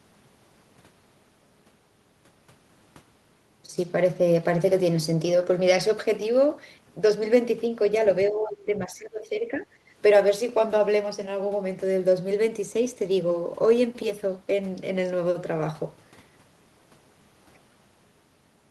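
From 8.3 to 9.65 s the speech sinks sharply, by about 15 dB at its deepest. The dip lasts roughly a second and a half. Then it recovers. This is speech suppressed in double talk. The likely cause is both ends talking at once. The echo canceller could not tell the near talker from the returning loudspeaker echo. So it turned everything down together, and the wanted speech was cut with the echo.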